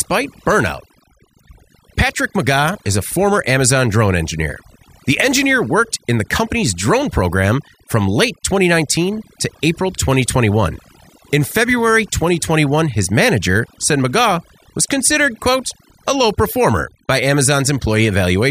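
From start to finish, the speech carries overdone noise removal. A noise reduction stage was pushed too hard on a noisy source. It cuts individual frequency bands deep, or shuts them off, whenever they sit close to what it takes for noise. Quiet parts of the voice fall below that line and vanish too. Between phrases the background drops, dotted with twinkling specks.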